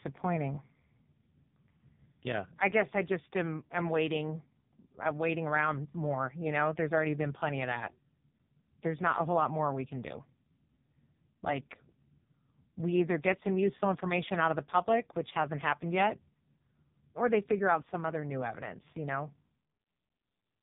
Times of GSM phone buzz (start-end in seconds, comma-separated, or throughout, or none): none